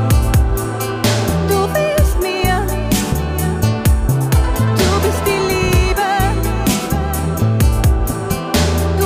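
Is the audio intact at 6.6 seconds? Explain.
Yes, the audio at 6.6 seconds is intact, with no dropout, click, distortion or other fault at that moment.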